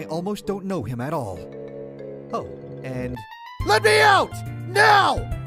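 No technical faults are audible.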